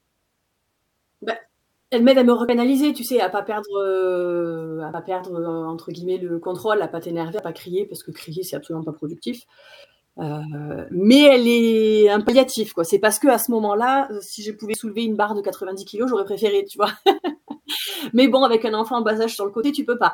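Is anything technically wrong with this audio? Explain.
Yes. The speech skips abruptly at 2.49 s (between "elle m'aide à me" and "tu sais à pas"), 4.94, 7.39, 9.84 (after "c'est absolument pas productif"), 12.29, 14.74 (between "heu si je pouvais" and "soulever une barre de") and 19.64 s. Each skip drops roughly 50 ms, and the two sides join with no silence. The likely cause is audio missing between chunks: the audio is processed in blocks of about 2.5 s, and a small piece is lost at each handover.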